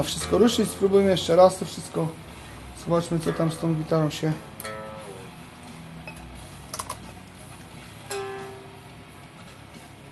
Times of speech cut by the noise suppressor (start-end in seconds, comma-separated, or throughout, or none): none